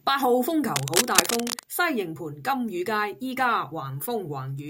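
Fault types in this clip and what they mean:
Cable scratch noise: dense, uneven bursts of scratching and rustling over the speech from 0.75 to 1.64 s, roughly as loud as the speech itself. The likely cause is a worn cable or connector being moved, making its contact resistance fluctuate rapidly.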